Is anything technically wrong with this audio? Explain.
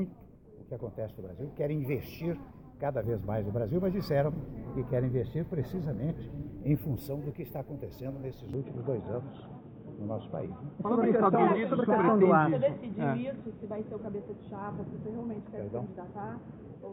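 Yes. From 8.54 s to the end the sound abruptly turns duller and boxier, with nothing above 3.8 kHz, which points to the input likely switched to a poorer device. Unlike plain filtering, a faint new background noise appears with it, though the level holds steady and there is no gap.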